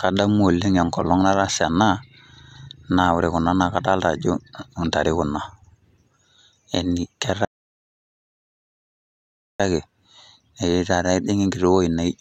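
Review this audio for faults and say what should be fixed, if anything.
There's an audio dropout to silence from 7.45 s to 9.60 s, so about 2.15 s of the speech is simply gone. The sound cuts off mid-flow and the gap is dead silence, with no room tone at all, then it snaps back in. That points to the input vanishing while the recorder kept writing; a loose cable, a flaky wireless link or a brief mute is the likely culprit. To prevent it, secure connections and monitor input meters live during takes.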